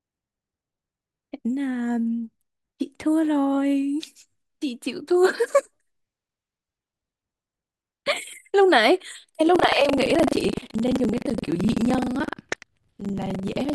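Speech clip with buffer tearing from 9.52 s to the end: writer and reader have slipped, so about a fifth of each period replays audio roughly 100 ms old, giving a 23.4 Hz rattle that fits a 2048-sample buffer.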